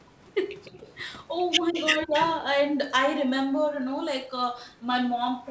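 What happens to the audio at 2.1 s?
Speech suppressed in double talk, from 2.05 to 2.13 s: the sound dips sharply, by roughly 20 dB, for a little under a tenth of a second. The likely cause is an echo canceller that could not separate the near talker from loudspeaker echo and turned both down.

Echo leak, from 2.19 to 2.26 s: a faint, delayed copy of the sound arrives about 211 ms late, around 20 dB below the main level. It likely slipped past a loudspeaker-side echo canceller that failed to remove everything its microphone picked up.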